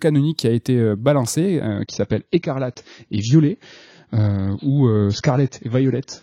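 From 1.67 s, after "a été euh balancé", the adaptive stream drops to a lower bitrate without a gap: treble vanishes above 7.1 kHz, a flat spectrogram ceiling.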